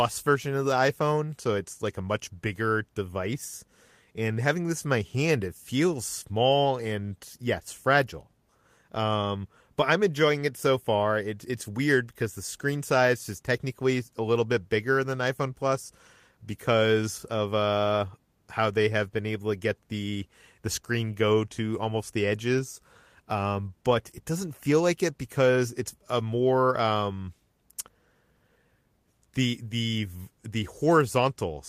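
No technical faults can be heard anywhere in the recording.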